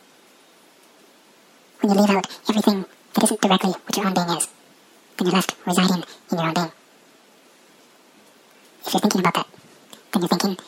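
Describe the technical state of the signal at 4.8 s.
At 4.8 s the sound runs twice as fast and an octave high: audio read two samples at a time (double speed), throughout, pairs taken as single frames.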